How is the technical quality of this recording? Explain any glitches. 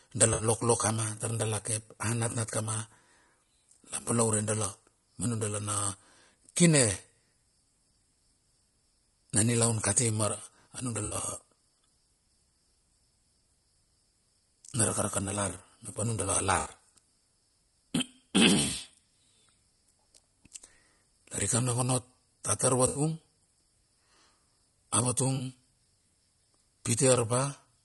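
The speech is clearly degraded throughout, and there are five brief dropouts.

Across the whole clip the voice sounds rough and grainy, with noise filling the gaps between harmonics and a thin, synthetic top end. This is likely low-delay AAC compression (AAC-ELD): its short frames resolve pitch poorly, and the damage fits a bitrate around 32 kbps.

At 0.33–0.43 s, 11.05–11.15 s, 16.59–16.69 s, 22.87–23.01 s (just after "a tar") and 25.35–25.41 s, short smeared, noisy patches replace the voice. This is AAC frame loss with concealment. About 60 ms, 80 ms at 22.87 s and 40 ms at 25.35 s went missing, and the decoder guessed the gaps from the preceding spectrum.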